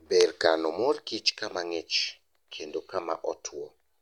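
No technical faults are audible.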